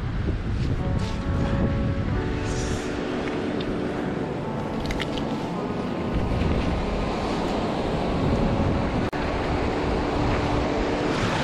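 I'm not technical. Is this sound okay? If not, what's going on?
No. Two separately encoded pieces were joined without trimming, causing a gap at a join of encoded pieces: the sound drops out for 38 ms at 9.09 s.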